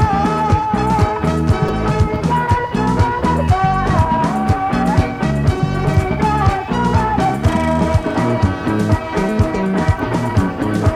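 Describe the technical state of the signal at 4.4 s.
At 4.4 s the signal is intact, with no audible dropout, distortion, glitch or level disturbance.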